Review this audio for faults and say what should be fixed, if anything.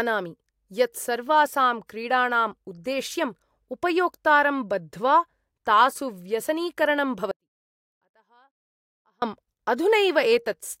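There's an audio dropout to a faint residue in this speech, right after "उपयोक्तारं बद्ध्वा तासु व्यसनीकरणं": from 7.31 to 9.22 s, about 1.9 s, the signal collapses abruptly to a faint leak roughly 40 dB down. The likely cause is a momentary break upstream while the path stayed live. Check cables, connectors and the interface link, and monitor the input live so any break gets caught during recording.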